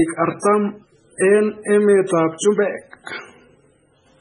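A short speech recording with a hard treble ceiling near 10.4 kHz and a watery, swirling texture throughout, which points to heavy MP3 compression at a very low bitrate of around 16 kbps as the likely cause. Pre-echo appears at 0.40 to 0.43 s and 1.17 to 1.20 s: a hiss of about 35 ms leads each sharp onset, because the codec's block-wide quantisation noise spills ahead of the attack.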